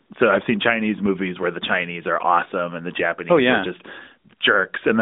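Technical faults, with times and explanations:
No technical faults can be heard in this speech. The AMR narrowband mobile codec path works as expected, holding the sound to a telephone band of roughly 200 Hz to 3.7 kHz with nothing above 3.8 kHz, and at 12.2 kbps its coding leaves only light traces.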